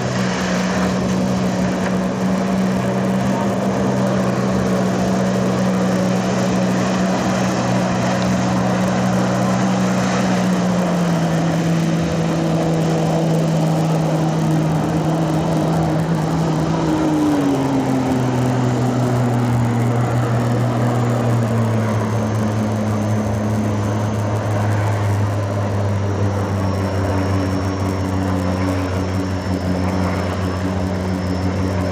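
From start to finish the sound carries a rough, steady buzz at 100 Hz, the mark of a resampler restarted on every block. The conversion from 16 kHz to 48 kHz was done on 10 ms chunks, each treated as if nothing lay beyond its edges, so every boundary gets a small error, a hundred per second. Unlike mains hum, the buzz vanishes in quiet stretches and grows with the signal.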